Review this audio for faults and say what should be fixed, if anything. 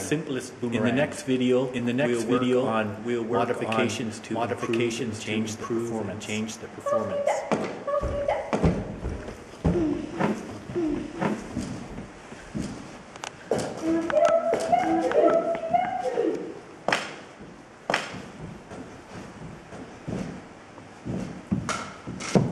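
There's a doubled audio track running the whole way through: a second full-band copy trails the original by about a second, at roughly the same level, with no decay or room colour. That's most likely the signal getting captured twice, once via a slower path. Check the routing so each source reaches the recording only once.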